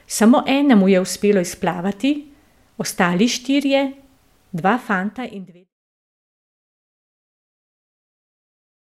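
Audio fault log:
No faults: a smooth fade out starting around 4.5 s brings the level gently down by 5.74 s with no click or hard edge.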